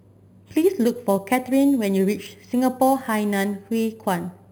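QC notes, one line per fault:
Throughout: imaging from sample-and-hold upsampling. A bright metallic fizz sits above the speech, at about 21 dB below it, with the lowest mirror band spanning roughly 5.5 kHz to 11 kHz. Each sample was simply repeated with no smoothing filter, which fits a rise from about 11 kHz to 48 kHz. Unlike hiss, the fizz rises and falls with the speech. Unlike aliasing, it lies above the original band, and its lowest copy moves opposite to the pitch.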